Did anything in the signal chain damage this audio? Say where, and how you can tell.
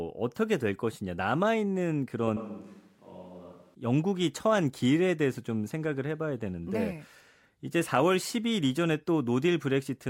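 Yes. From 2.37 to 3.75 s the speech abruptly turns roomy and hollow, loses bass and drops about 10 dB, with room noise rising to roughly 30 dB below the speech. This is likely a switch to a distant microphone at the capture stage, after the close microphone's feed dropped out. The waveform shows a sudden step in level at both edges, and the spectrogram shows a thinner low end, smeared reverberant tails and a raised noise floor.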